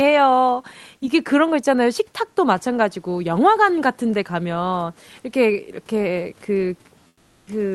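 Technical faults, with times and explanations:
7.07 to 7.47 s, comfort noise in place of the background: the room background gives way to a flat, featureless hiss about 14 dB quieter for 400 ms, likely from discontinuous transmission filling the pause.
7.37 s, onset clipped by the voice detector: the returning speech starts abruptly, its first 100 ms missing and covered by that steady noise, likely because detection lagged the onset.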